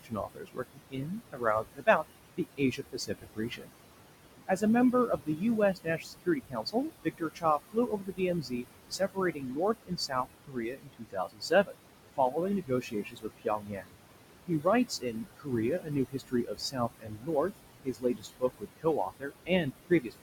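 Noise suppressor artifacts run from start to finish. The suppressor pulls what it judges to be steady noise down by about 21 dB frame by frame, so the room noise, sitting about 10 dB below the speech, pumps between phrases.

Speech cut by the noise suppressor occurs at 0.03–2.04 s, 2.37–3.71 s, 4.47–5.42 s, 5.74–11.77 s, 12.16–13.97 s, 14.47–17.52 s and 17.84–20.23 s. Soft speech mistaken for noise drops by about 18 to 22 dB over roughly a third to half of each stretch, leaving consonants and word endings swallowed and faint.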